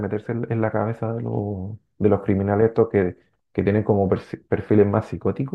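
No faults are audible anywhere in the recording.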